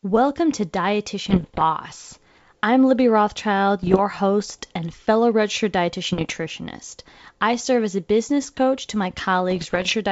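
Pops and rough bursts with brief level jumps hit the speech at 1.30–1.63 s, 3.83–4.02 s just before "host and fellow registered", 6.04–6.34 s just after it, and 9.51–9.94 s after "business coach to my". These are bit errors on an ADPCM link, the G.722 wideband call path. Each flipped bit knocks the decoder's step size and predictor off, so every error rings on for some milliseconds.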